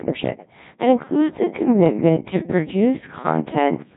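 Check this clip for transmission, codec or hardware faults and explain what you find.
Two faults are present. One affects the whole clip, and one affects the final three seconds.

Throughout, the speech has the robotic, buzzy quality of a Codec 2 vocoder. Sine-wave resynthesis replaces the real waveform. Heavy damage and nothing above 3.8 kHz fit a 1.6 kbit/s mode.

From 1.0 s to the end, the pace suddenly slows to about 0.59 times normal speed while pitch holds. It drags, likely a time-stretched section.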